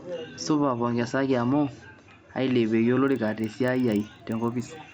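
From 3.04 s to the end, a 25 Hz buzz of ticks rides the speech: the resampler restarted on every 40 ms block, likely a 16 kHz to 48 kHz conversion, misjudging each edge.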